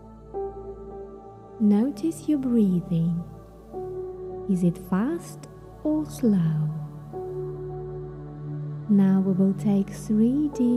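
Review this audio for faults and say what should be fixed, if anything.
Nothing here needs fixing; there are no faults to report in this one, so it can be left as it is.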